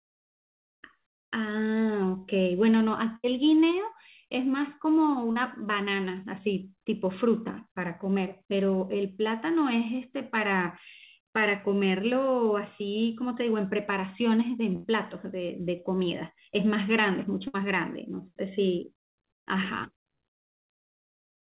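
A burst of packet loss at 3.16 to 3.26 s drops about 80 ms of the speech. The receiver stretches the last sound to cover the gap and fades it down, so a held buzz or fading hiss replaces the missing stretch before the audio jumps ahead.

Short concealed packet loss at 5.32 to 5.38 s loses about 40 ms. The decoder fills it by extending the preceding sound and then blending back into the real audio, which leaves a brief smear or wobble.

Further bursts of packet loss at 14.76 to 14.86 s and 17.48 to 17.56 s cut about 80 ms and 60 ms respectively. Each gap becomes the same faded continuation of the last sound, over a narrowband call path with nothing above 4 kHz.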